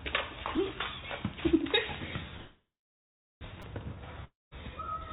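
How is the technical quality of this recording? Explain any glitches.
The recording has four audible glitches of three kinds. It comes through a narrowband call path that carries nothing above 4 kHz, which fits G.711 mu-law at 64 kbps.

Repeated buffer, at 0.57 s and 3.62 s: the playback device ran short of fresh audio and replayed its last 5 ms block. At 0.57 s the block plays one extra time, which is heard as a single click. At 3.62 s it plays three extra times, and the hard joins merge into a brief buzz. No audio is lost either time.

Call audio freeze, from 2.37 to 3.44 s: packets were likely held up in transit, so the jitter buffer emptied. The receiver stretched the last sound into a fading buzz and then held about 0.75 s of near-silence while it waited. About 1.04 s of fill was added in total. When the packets arrived, the audio resumed exactly where it stopped, so nothing is missing, but everything afterwards runs about 1 s late.

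Long network dropout, from 4.25 to 4.54 s: audio likely stopped arriving altogether for this stretch. The receiver covered it with about 0.27 s of fill, a decaying buzz that gives way to about 0.18 s of silence. When the sound returns, it picks up further along, and roughly 270 ms of the original audio is gone for good.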